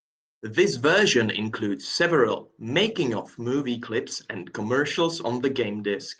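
Nothing stood out on listening to this recording of speech.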